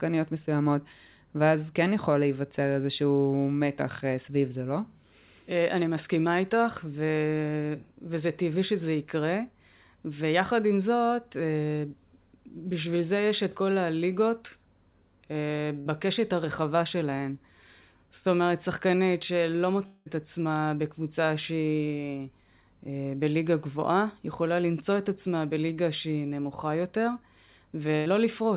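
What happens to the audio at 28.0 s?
From 27.96 to 28.08 s there is a burst of packet loss: about 100 ms of audio never arrived, and the receiver stretched the last sound and faded it down. Unlike a dropout, there is no silent gap; the sound smears, then resumes further on.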